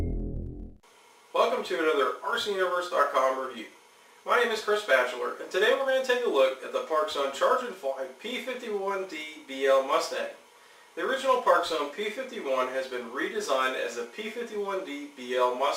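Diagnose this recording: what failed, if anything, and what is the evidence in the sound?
Nothing failed; no stage of the chain shows a fault.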